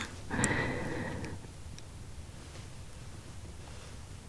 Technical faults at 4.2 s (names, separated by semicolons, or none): none